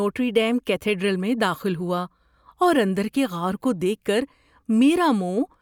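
The speech signal carries no audible technical faults at any point.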